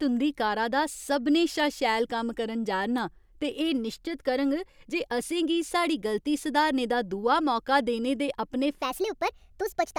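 At 8.82 s the speech jumps into a section at the wrong speed, and it stays there to the end of the clip. From this point the audio plays 1.32 times faster than it should. Pitch and pace shift together, as they must when playback speed changes. The voice rises by about five semitones and sounds thin and hurried. The likely cause is an editor or player running this part against the wrong clock.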